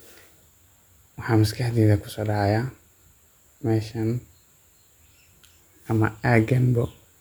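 No dropouts, clicks, distortion or other technical faults can be heard anywhere in this speech recording.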